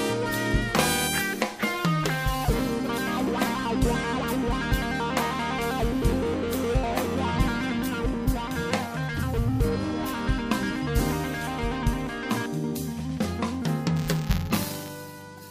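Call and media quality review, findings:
Robotic buzz at about 172 Hz, 13.96–14.89 s, only while sound is present. Buffer tearing in the playback ring buffer: writer and hardware reader crossing each period, a small slice replaced by audio roughly 10 ms stale. Rate fits a 256-sample buffer.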